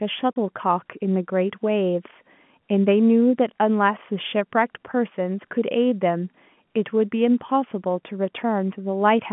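At 0.34 to 0.36 s, packet loss filled with silence cuts a hole of about 30 ms into the speech, which fits a single lost packet. Unlike concealment, which would smear or repeat sound across the gap, the dropout is dead silent with hard edges, heard through the narrow 150 to 3400 Hz telephone band.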